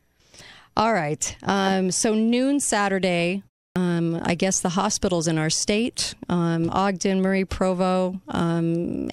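Speech, with one clipped start after a pause. At 3.71 to 3.76 s, the sound resumes after a 0.3 s silence. About 49 ms of its onset is missing, so it begins abruptly. The output device slept during the gap and woke too late.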